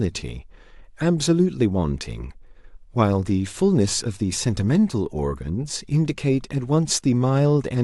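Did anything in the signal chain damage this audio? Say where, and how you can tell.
No, nothing in the signal chain has audibly damaged this speech, which has no dropouts, distortion or other defects at any point.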